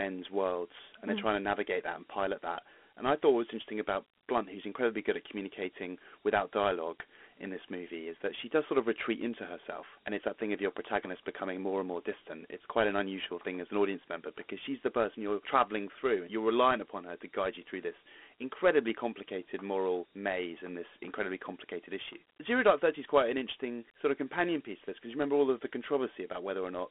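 Throughout, Dialogic VOX ADPCM confines the speech to 250 Hz–3.4 kHz, with nothing above 3.8 kHz. Unlike plain phone filtering, a gritty 4-bit hiss clings to every syllable.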